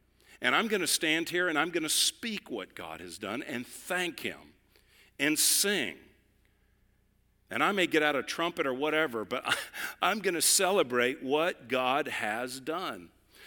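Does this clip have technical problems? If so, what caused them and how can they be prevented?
No, nothing in this speech recording points to a technical fault, so there is no cause to trace and nothing to prevent.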